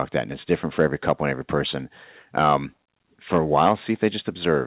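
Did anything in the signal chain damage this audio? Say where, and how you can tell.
Yes. Microphone overload at the converter: harsh crackle at 0.79–1.12 s after "it's different", at 2.37–2.56 s after "and every person", at 3.33–3.73 s, and at 4.03–4.06 s. Peaks likely overran the converter by about 1 to 5 dB and were flattened.

Microphone volume stepped down by call processing at 3.69 s: level drops by about 3 dB in one step, right inside a clipped peak. Automatic gain control likely reacted to the overload.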